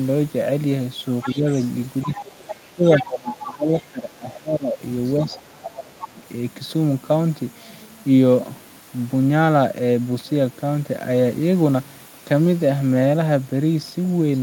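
From 1.21 to 3.82 s a second voice sits underneath the speech, roughly 15 dB down. This is the other side's voice leaking through, likely loudspeaker echo that the echo canceller left in the microphone signal. Short faint bursts of it return at 5.31 to 5.41 s, much lower at around 25 dB down, and at 5.99 to 6.05 s, back near 15 dB down. Over the same stretch the main speech is pulled down. At 1.24 to 1.46 s it dips by up to roughly 10 dB. From 2.04 to 6.25 s it drops repeatedly, by as much as about 20 dB, for around three seconds in total. This is speech suppressed in double talk, likely the canceller attenuating the near talker along with the echo.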